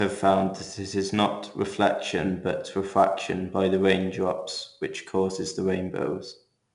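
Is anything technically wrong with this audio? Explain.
Yes. 4-bit ADPCM compression runs throughout the speech: each sample is coded as a coarse 4-bit step from a prediction, so a gritty hiss rides on louder passages. Nothing sounds above 10.6 kHz, which fits a reduced sample rate, with a bitrate near 89 kbps.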